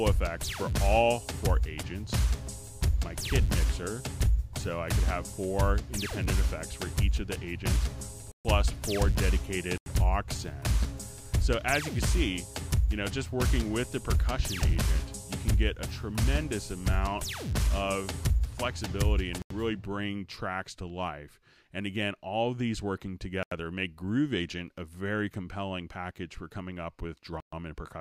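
Five blocks of digital silence interrupt the audio: at 8.32 s (about 133 ms), 9.78 s, 19.42 s and 23.43 s (each about 85 ms, which fits a 4096-sample buffer), and 27.40 s (about 124 ms). In each, the output buffer was left as zeros, most likely because it was not filled in time. The sound drops to dead silence and returns with no fade, so each gap is heard as a short hole.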